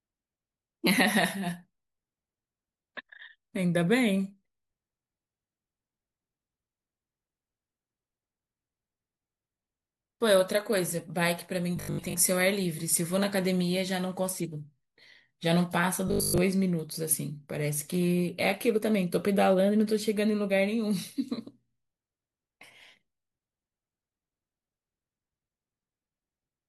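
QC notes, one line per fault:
11.77–12.15 s and 16.08–16.38 s: robotic sound from repeated short buffers. The speech turns into a rigid, metallic buzz locked at 50 Hz that still loosely tracks the syllables. This is likely the playback repeating a 20 ms slice whenever fresh audio is late. About half the first stretch and most of the second is repeated material, so real speech is lost. Unlike mains hum, the 50 Hz tone exists only inside the speech and carries its shape. Unlike a stutter, it never halts or jumps back.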